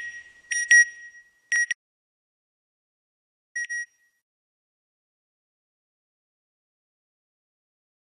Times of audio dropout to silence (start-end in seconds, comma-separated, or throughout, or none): 1.73-3.55